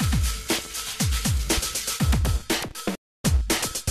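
At 0.59 to 0.68 s a loud pop arrives as two sharp clicks about 5 dB above the sound, and at 1.57 to 1.61 s a single pop peaks about 10 dB above it. The sound continues underneath both, and they are likely voltage spikes from a switch, static or driver glitch. From 2.95 to 3.25 s a digital broadcast dropout mutes the sound within 3 ms for 288 ms, which fits roughly a dozen lost frames, before it returns.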